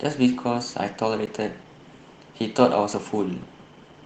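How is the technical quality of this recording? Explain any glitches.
There's one real glitch here, a block of digital silence at about 1.26 s in the speech. For roughly 15 ms the sound drops straight to silence and then comes back, with no fade in or out. That usually happens when the playback or processing side doesn't fill its output buffer in time, so the gap gets padded with zeros. Because the waveform jumps abruptly at both edges, you hear it as a quick tick or tiny pop rather than a noticeable hole. The Opus voice compression underneath, running at 20 kbps in hybrid mode, leaves only a light codec footprint on the sound.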